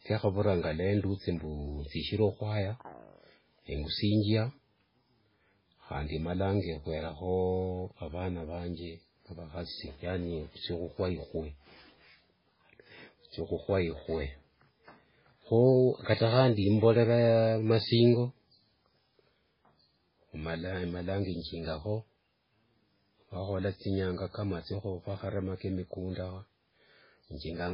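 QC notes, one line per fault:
Throughout, MP3 compression. Nothing sounds above 5.3 kHz, so the speech is dull and muffled. Heavy watery, swirling damage runs through it as weak frequency detail drops in and out between frames. The likely cause is a very low bitrate, around 16 kbps.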